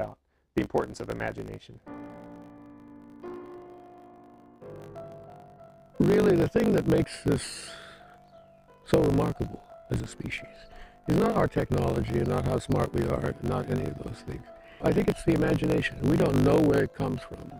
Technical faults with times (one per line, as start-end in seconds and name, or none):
0.00-17.60 block size mismatch (truncated)